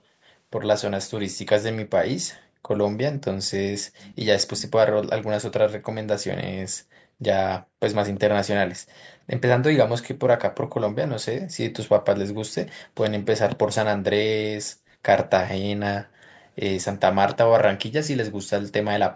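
Around 3.99 to 4.16 s, and again briefly at 8.15 to 8.2 s, you can catch a faint ghost of the speech trailing about 344 ms behind and sitting well under the main voice. That's an echo leak, likely the far-end loudspeaker bleeding back into the mic and slipping past the echo canceller.

Then there's background gated by the echo canceller. At 7.67 to 7.76 s, 14.74 to 15.02 s and 16.05 to 16.21 s the room sound suddenly ducks by about 40 dB as the canceller clamps the mic down. The first dip is only a blink, the middle one is the longest, and each time the background comes back once the canceller lets go.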